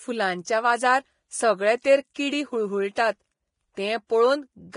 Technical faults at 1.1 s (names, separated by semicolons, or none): Vorbis compression